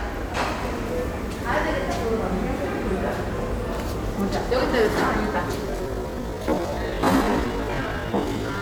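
From 5.62 s to the end, a time-stretched section slows the audio to 0.565x speed at unchanged pitch, likely from software repeating short pieces. It drags, and spectrogram features stretch wider in time.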